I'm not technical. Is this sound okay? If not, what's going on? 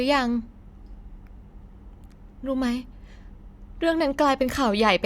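Yes, this recording sounds fine; nothing is going wrong.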